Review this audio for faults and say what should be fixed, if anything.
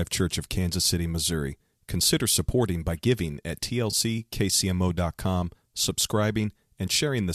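AAC frame loss with concealment at 3.91 to 3.94 s, right after "supporting by giving at". A smeared, phasey patch of about 20 ms fits two lost frames of the likely low-delay AAC stream, which the decoder rebuilt from the preceding spectrum. Unlike a plain dropout, it never falls to silence or clicks. Forward error correction or redundant frames on the transport would prevent it.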